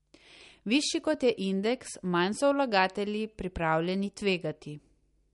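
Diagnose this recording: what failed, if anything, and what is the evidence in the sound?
The failure is at the codec stage, likely MP3 compression. Across the whole clip the speech has nothing above 11.2 kHz and carries a plainly audible watery, swirly texture. That fits a low bitrate around 48 kbps: the encoder ran short of bits, cut the treble at a fixed point and dropped weak frequency lines that flicker on and off between frames. A simple low-pass filter would remove the top just as cleanly but leave no swirl behind.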